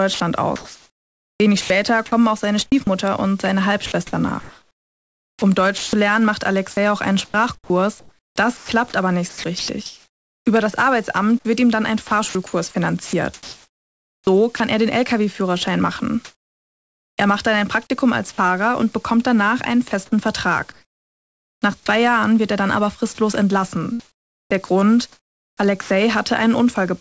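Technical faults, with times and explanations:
0.14–2.87 s, 3.86–10.46 s, 11.39–14.60 s (before "er den"), 19.88–21.86 s (after "und bekommt danach einen"), 24.00–25.90 s: sound chopped by the voice detector. Quiet speech portions flicker into synthetic noise, likely from a voice detector toggling transmission, which leaves the speech choppy.
16.25–17.18 s: comfort noise in place of the background. The natural background is replaced by flat, featureless noise about 6 dB different, likely the receiver's synthetic fill during a transmission pause.
18.32–18.38 s (before "und bekommt danach einen"), 23.15–23.18 s: sound dropped by the voice detector. Brief speech fragments give way to steady noise, likely because the detector treated them as background and stopped sending.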